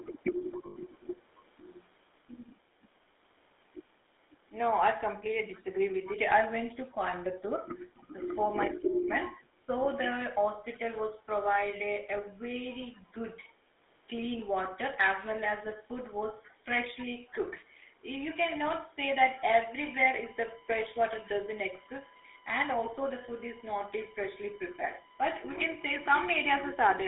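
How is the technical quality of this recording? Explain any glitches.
The recording has clear phone-line damage throughout, plus a few brief glitches near the start and scattered later.

For the whole clip, a GSM full-rate codec has encoded the speech. It rebuilds the voice from a vocal-tract model driven by sparse, regularly spaced pulses, and the band runs only from about 250 Hz to 3.6 kHz, which fits the 13 kbps full-rate coder. The damage is plainly audible: a buzzy, gravelly roughness over all the speech, and a muffled, boxy tone with no upper treble.

An echo leak appears at 0.0 to 0.2 s, 0.51 to 1.42 s, 7.8 to 8.0 s, 8.7 to 8.77 s, and 17.28 to 17.34 s. Each is a faint delayed copy of the voice trailing about 0.27 s behind. It is quiet, roughly 25 to 35 dB below the speech, and comes in brief scraps, with the longest running about a second near the start. The likely cause is a speakerphone whose echo canceller let part of the loudspeaker sound reach its microphone and get sent back.

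Lost GSM frames occur at 0.66 to 0.77 s, a gap of about 100 ms that overlaps the early echo. The decoder had no valid data there, so it repeated the last good frame's settings. Instead of a clean dropout, the sound freezes into a short, rough, metallic ring that smears across the gap before normal speech resumes.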